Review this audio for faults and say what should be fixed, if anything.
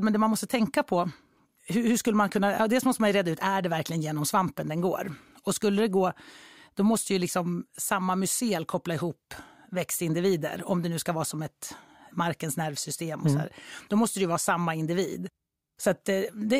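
No faults found; nothing in this recording needs fixing.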